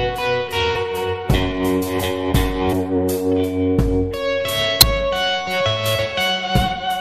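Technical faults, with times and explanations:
0.75 s, 2.72 s and 4.81 s: damaged data in a compressed stream, three short blips of under 20 ms each. Corrupted bytes make the decoder misread those frames and lose sync. It briefly emits garbage while hunting for the next valid frame header.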